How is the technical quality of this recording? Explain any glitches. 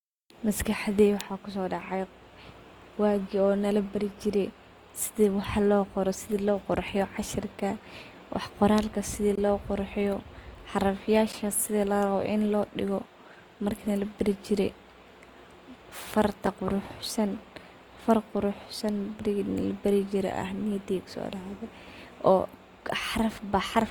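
The speech has audible faults: codec damage throughout and three brief dropouts.

Opus compression, likely at about 24 kbps in its music mode, runs throughout. The encoder fills starved bands by folding or with noise, so the speech sounds grainy and rough, though it stays fullband up to about 20.3 kHz.

There are three blocks of digital silence, at 9.36 to 9.38 s, 11.32 s and 16.46 s. Either the program did not fill the output buffer in time or a calculation gave invalid numbers, so zeros replaced the audio. These gaps fit buffers of 1024, 512 and 256 samples. The first lasts about 21 ms and is a short hole. The others last about 11 ms and 5 ms, too short to hear as silence, so they come across as ticks or dips.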